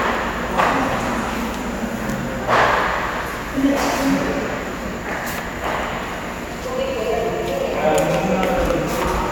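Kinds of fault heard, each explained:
No faults detected in this audio.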